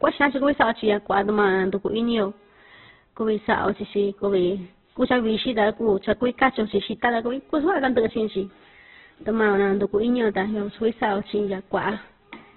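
Opus compression runs throughout the speech, heavily damaged and grainy. Nothing sits above 4.1 kHz, so the sound is narrowband and muffled. The rough, noisy texture points to a very low bitrate, likely around 8 kbps, where the encoder fills starved bands with noise or folded copies of lower bands.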